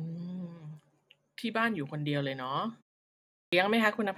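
At 3.12 s speech bursts in missing its first 0.40 s: a clipped start after a pause, with the output device waking too slowly after a 0.38 s gap.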